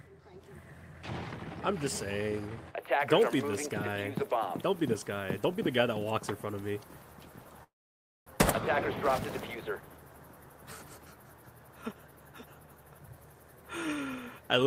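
At 7.63 s the audio smears into a fading buzz that dies into near-silence until 8.36 s, then picks up again with roughly 0.6 s simply gone. That's most likely a long network dropout: nothing arrived, so the receiver stretched the last sound, then gave up.

From 9.75 to 9.98 s things rush ahead at about 115% speed with the pitch unchanged. That's a jitter buffer speed-up: the receiver shaved tiny pitch-period slices, around 40 ms in total, to trim the backlog.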